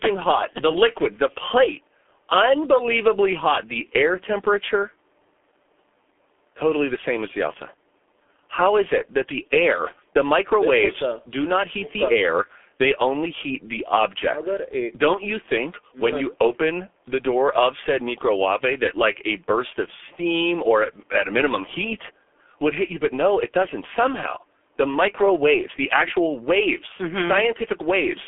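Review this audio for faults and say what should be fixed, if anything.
G.723.1 codec damage runs the full clip: the speech is confined to roughly 300 Hz to 3.4 kHz, sounding muffled and hoarse with smeared consonants, which fits a bitrate near 6.3 kbit/s. Route the call through a wideband codec at a higher bitrate instead of G.723.1.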